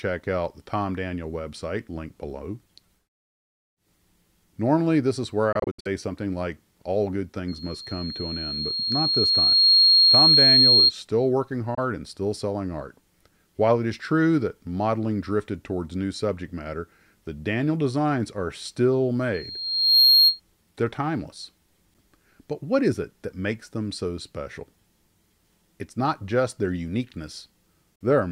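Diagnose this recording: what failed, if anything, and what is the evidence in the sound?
Bluetooth dropout at 5.52–5.87 s (scattered gaps totalling 186 ms), 11.75–11.79 s and 27.95–28.02 s: silent holes, likely from wireless packets arriving too late and being dropped.

Loudspeaker feedback squeal at 7.48–10.92 s and 19.34–20.40 s: a 4.2 kHz tone swells over about 2 s and 0.7 s respectively to roughly 10 dB above the sound as the acoustic loop exceeds unity gain.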